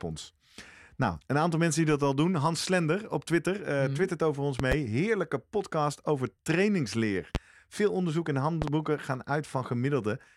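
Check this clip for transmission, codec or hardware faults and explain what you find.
There's one problem in the speech: loud pops, three of them. Right after "mhm twittert over ons", at 4.60 to 4.75 s, there's a quick double pop. After "podcast over trainingsleer" there's a single one at 7.35 to 7.38 s, and after "onderzoek en" another double at 8.62 to 8.70 s. Each jumps well above the speech while the talking carries on underneath. Likely cause: a voltage spike from a plug, switch, static or driver glitch getting into the signal chain.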